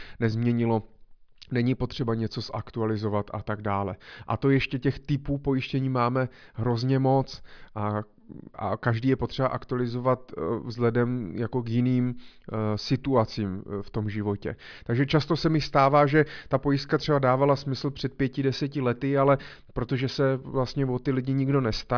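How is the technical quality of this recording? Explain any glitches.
Nothing stood out on listening: there were no glitches to explain.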